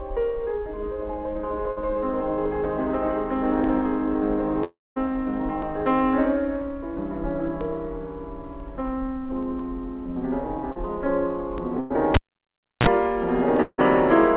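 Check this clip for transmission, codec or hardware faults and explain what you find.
Six faults are audible, spread across four kinds, all heard through a band-limited call path with nothing above 4 kHz, which fits a narrowband telephone codec such as G.711 mu-law.

Short concealed packet loss occurs at 1.72 to 1.78 s and at 10.72 to 10.78 s. About 40 ms is missing each time, and the decoder papers over it with extrapolated sound, leaving a brief smear or wobble. The second instance also stretches the timing by a few milliseconds.

At 4.64 to 4.98 s, about 0.32 s of audio is gone. A fading buzz or hiss carries into roughly 0.21 s of silence before the sound resumes further on, likely a long network dropout. The same pattern returns at 13.62 to 13.80 s, with 0.16 s lost and about 40 ms of silence.

A burst of packet loss hits at 11.80 to 11.92 s. Around 100 ms vanishes, and the receiver holds and fades the last sound with no silent gap, so the audio jumps ahead.

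A cable pulled and plugged in spans 12.14 to 12.87 s. A pop is followed by about 0.67 s of near silence, then roughly 31 ms of 60 Hz mains buzz as contact returns, and a second pop.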